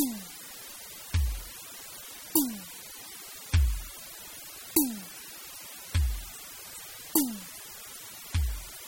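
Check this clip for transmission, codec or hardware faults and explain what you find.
Two faults run through the whole music clip from start to finish.

Throughout, a constant, even hiss sits only about 15 dB below the music, without distortion. This is low bit depth with dither, the noise level pointing to roughly 7 bits.

Throughout, the music sounds watery and swirly, with nothing above 16.6 kHz. The likely cause is heavy MP3 compression, consistent with about 32 kbps, dropping weak frequency content.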